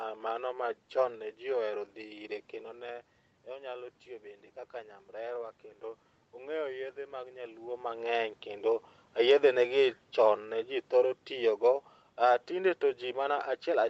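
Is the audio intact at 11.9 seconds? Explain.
No. Automatic gain falling runs from 9.15 s, just after "mag nyaluo mag'eny kendo", to 13.9 s: the gain control judged the input too loud or its background noise too strong and is steadily lowering it, so speech and background sink together.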